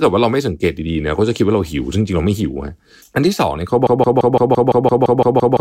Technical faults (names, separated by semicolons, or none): broken-record loop